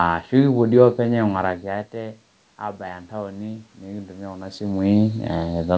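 An automatic gain rising fault runs from 1.29 to 5.57 s in this speech clip. The gain control reacts to input that has dropped by about 15 dB, around when the talker moves back near 1.5 s, and slowly lifts its gain by about 8 dB. Voice and room noise swell together over those four seconds rather than the level changing at once. The audio is band-limited to 8 kHz, which fits a G.722 call path.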